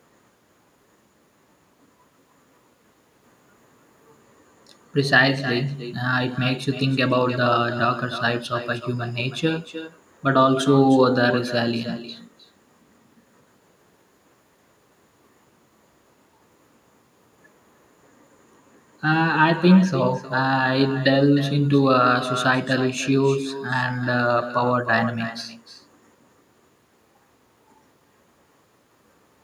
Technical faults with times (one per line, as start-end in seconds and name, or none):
0.00-29.43 echo with no canceller